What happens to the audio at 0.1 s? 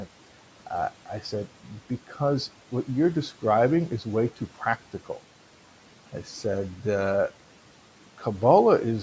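Nothing goes wrong at 0.1 s; the speech is intact there, with only the faint room noise, about 21 dB below the speech, and the normal bass roll-off of the call microphone processing.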